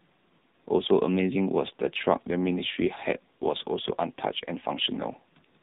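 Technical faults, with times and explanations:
Throughout, AMR narrowband mobile codec: the speech is squeezed into the mobile telephone band, with everything above 4 kHz gone, so consonants lose their edge and the voice sounds boxed in and heavily buzzy and synthetic. The coarseness points to one of the codec's low modes, around 6.7 kbps. On a spectrogram the energy stops dead at a flat ceiling near 4 kHz, with smeared, blocky harmonics below it. The waveform looks smoothed and lacks fine detail.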